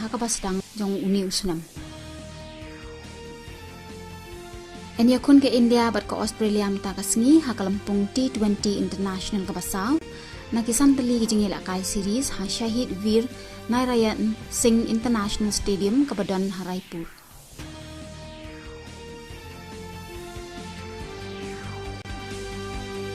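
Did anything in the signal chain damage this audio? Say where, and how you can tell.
Yes. The damage sits at the streaming and playback stage, as a gap between stream segments. Two short holes of silence with hard edges break the sound. The first runs from 9.99 to 10.01 s, about 27 ms long. The second runs from 22.02 to 22.05 s, about 30 ms. Both fall on segment boundaries of a 4-second stream. The timestamps of adjacent segments don't meet. The player pads the missing span with silence, so nothing is lost, only interrupted.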